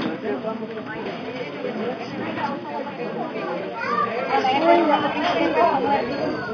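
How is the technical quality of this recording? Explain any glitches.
Nothing in the recording stands out as a glitch; the sound runs along with no dropouts, clicks or other technical hiccups to point to.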